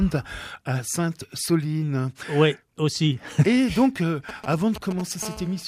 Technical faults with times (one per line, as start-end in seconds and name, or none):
4.29-5.01 GSM signalling bursts
5.23-5.63 GSM phone buzz